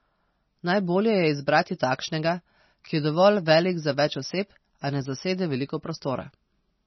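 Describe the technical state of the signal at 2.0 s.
MP3 compression artefacts at 2.0 s, present throughout the clip: nothing is heard above about 5.9 kHz, and the speech sounds watery and swirly, most likely from a low-bitrate MP3 encode around 24 kbps that cut the treble and dropped weak frequency lines.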